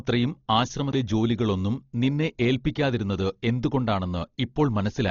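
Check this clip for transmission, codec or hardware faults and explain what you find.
The speech carries heavy codec damage from start to finish, most likely Dolby Digital compression. Nothing reaches above 6.9 kHz, which fits a starved bitrate near 32 kbps. Lines left without mantissa bits are refilled with dither noise, so voiced tones sound dull and wrapped in rough, fluttering grain. A plain low-pass filter would sound muffled but clean.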